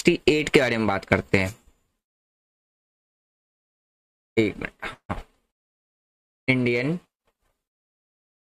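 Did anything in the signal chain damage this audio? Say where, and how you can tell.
Yes. A call audio freeze runs from 4.93 to 5.11 s. The last sound smears into a fading buzz, then about 90 ms of silence. Playback resumes where it stopped, adding a 157 ms delay with nothing lost. Likely network packets stalled and drained the jitter buffer.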